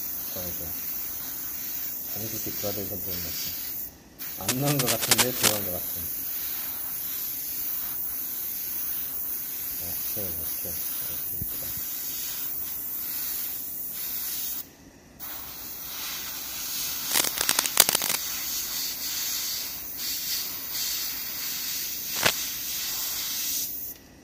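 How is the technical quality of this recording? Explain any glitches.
The recording has three bursts of cable scratch noise: from 4.48 to 5.60 s, from 17.11 to 18.16 s, and a brief one from 22.14 to 22.31 s. Each is a dense, uneven crackle, roughly 5 dB louder than the audio underneath. The likely cause is a worn cable, connector or control being moved, so its contact resistance jumps erratically and injects noise into the signal. It sounds like scratching or rustling laid over the audio for a moment.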